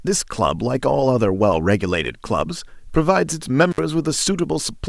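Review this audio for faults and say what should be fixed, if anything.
An intermittent contact fault hits the speech between 3.71 and 3.79 s. A loose plug or cable opens for about 59 ms. The sound drops out, with crackle at each edge and faint hiss in the gap. Reseat or replace that connector and secure the cable.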